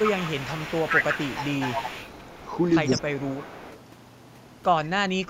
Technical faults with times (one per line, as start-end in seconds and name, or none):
0.00-3.78 echo leak
2.95-3.11 speech suppressed in double talk
5.24-5.30 speech suppressed in double talk